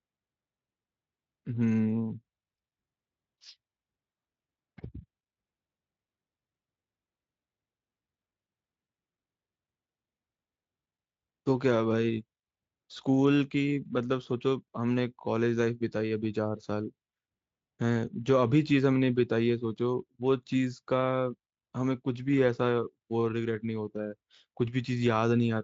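No faults found in this speech recording; the Speex coding leaves only light traces consistent with a fairly high quality setting.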